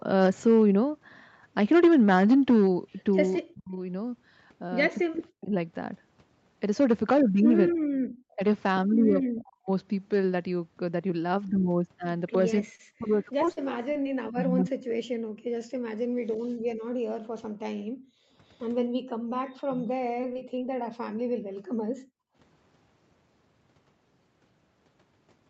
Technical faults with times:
3.54-19.90 speech suppressed in double talk
5.16-5.20 echo leak
7.72-8.08 background gated by the echo canceller
12.75-12.81 short concealed packet loss
13.45-14.07 repeated packet loss (robotic sound)
15.34-22.36 background gated by the echo canceller
20.21-20.59 repeated packet loss (robotic sound)

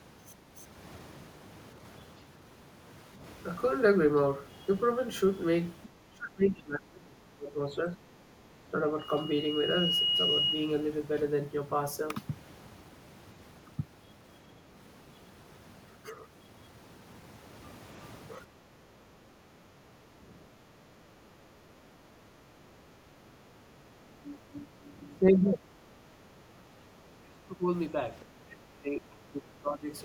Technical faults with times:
3.16-3.22 speech suppressed in double talk
6.09-8.80 speech suppressed in double talk
8.99-10.92 loudspeaker feedback squeal
18.51-18.79 speech suppressed in double talk
19.60-20.32 speech suppressed in double talk
21.70-21.94 background gated by the echo canceller
23.00-27.68 speech suppressed in double talk
28.24-29.90 speech suppressed in double talk

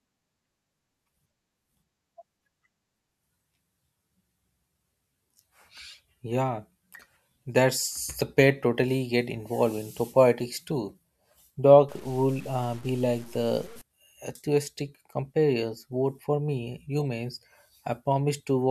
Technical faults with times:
11.89-13.81 low bit depth without dither

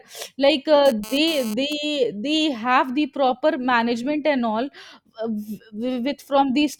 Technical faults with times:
0.86-1.73 GSM phone buzz

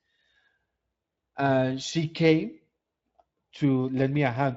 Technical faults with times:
none

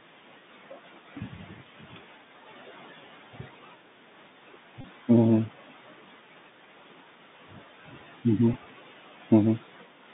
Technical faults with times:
0.00-10.13 Bluetooth CVSD headset codec
4.81-4.84 Bluetooth headset packet repeated
8.53 Bluetooth headset packet repeated

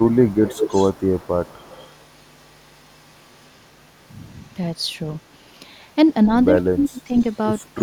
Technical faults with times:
0.00-3.66 echo leak
5.18-5.29 echo leak
6.67-7.14 speech suppressed in double talk
7.11-7.66 echo leak
7.76-7.80 speech suppressed in double talk

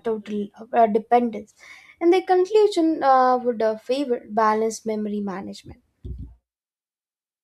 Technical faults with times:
none

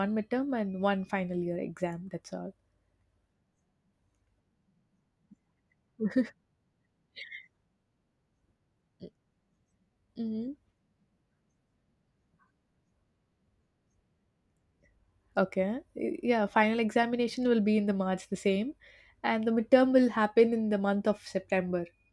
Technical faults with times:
none

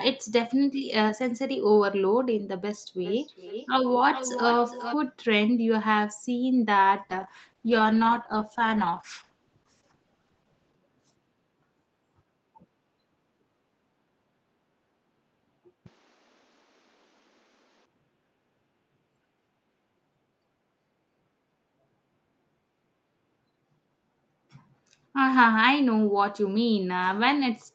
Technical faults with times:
2.99-4.99 feedback echo between two devices
7.10-10.83 call bitrate drop
15.86-17.86 input switched to a poorer device

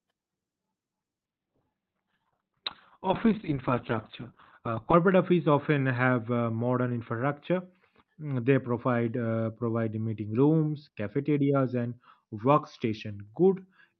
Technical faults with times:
1.27-13.99 call bitrate drop

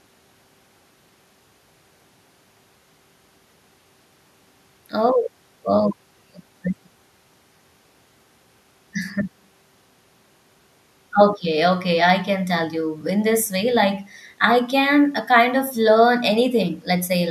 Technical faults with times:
none

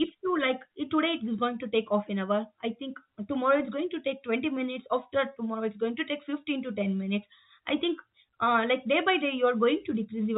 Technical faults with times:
none

